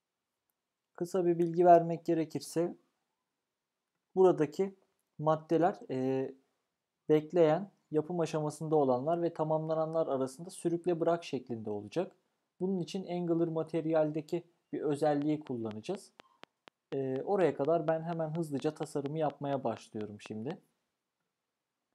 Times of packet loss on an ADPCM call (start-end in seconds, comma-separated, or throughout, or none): none